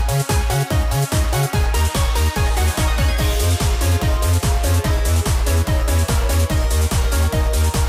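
No technical faults can be heard anywhere in the audio.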